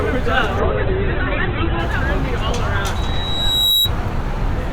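From 0.6 s to 1.87 s there is a call bitrate drop. The call's bandwidth estimate fell and the encoder was pushed from 64 kbps down to 8 kbps, staying at the bottom for about 1.2 s. At that rate the audio band shrinks from 20 kHz to 4 kHz, so the sound turns muffled and grainy, then opens up again. Unlike a packet-loss glitch, nothing drops out or repeats. The whole passage keeps flowing, only duller and coarser.

From 2.95 s to 3.91 s a loudspeaker feedback squeal appears. A microphone was picking up the speaker it feeds, and at 3.9 kHz the loop gain went above one. That single tone swells by itself over roughly three-quarters of a second until it sits a few dB above the rest of the sound. It is not a steady electrical whine, because it grows out of the audio rather than being present throughout at a constant level.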